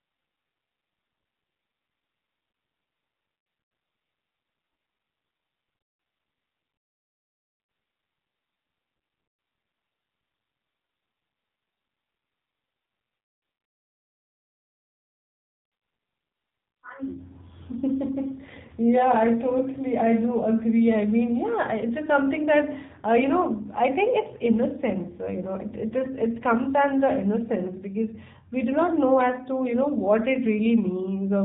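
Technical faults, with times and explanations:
Throughout, AMR narrowband mobile codec: everything above about 3.8 kHz is gone, so the speech sounds like a phone call. The voice has a clearly buzzy, synthetic edge, which fits a low bitrate of around 7.4 kbps, with too few pulses per frame to rebuild it cleanly.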